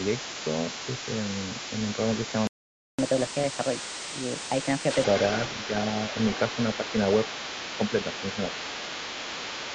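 A second voice runs under the speech for the whole clip, about 10 dB down. This is likely the other side's voice leaking through past an incomplete echo canceller.

At 2.47 s the sound cuts to silence for about 0.51 s, until 2.99 s. This is a playback stall, likely from the player running out of data.

From 2.99 s to 5.04 s the speech runs 1.25 times fast and roughly four semitones high. This catch-up at higher speed recovers the lost time before settling.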